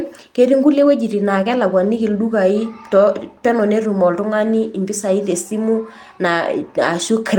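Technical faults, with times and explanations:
Nothing technical goes wrong anywhere in this one; it's just speech from beginning to end with no faults to point out.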